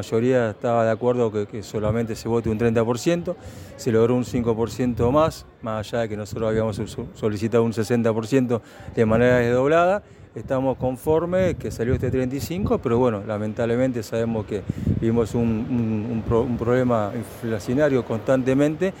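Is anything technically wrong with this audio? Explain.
No, there is nothing technically wrong that can be heard in this audio.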